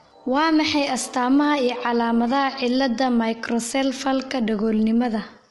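Low-delay AAC compression runs through the whole clip. The speech has a rough, grainy texture, with a noisy fill between the harmonics, and nothing is heard above 11.6 kHz. The likely cause is AAC-ELD coding at a rate that fits roughly 32 kbps. At so low a rate the bits run short. The coder then smears noise into the gaps and cuts the top band.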